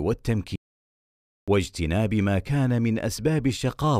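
The input feed was likely lost from 0.56 to 1.48 s while recording continued, so silence was written: an audio dropout to silence. The speech cuts off abruptly, leaving about 0.92 s of dead silence with no room tone, then resumes mid-flow, with that speech gone.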